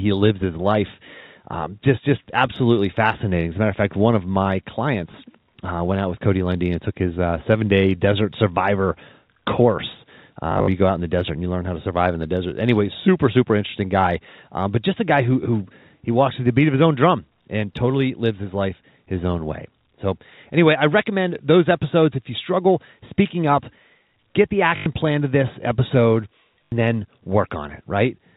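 At 10.52 s, just after "day desert survivor course", the speech breaks into a short robotic stutter until 10.68 s. This is packet loss with the last packet repeated. About 120 ms of audio is lost across 160 ms, with the longest gap 60 ms. The repeated run buzzes at about 50 Hz, which fits 20 ms packets. The same fault returns at 24.76 s for 100 ms, before "plan to this episode". It comes back at 26.65 s for 80 ms, just after that phrase. The telephone-band sound of the line comes through cleanly.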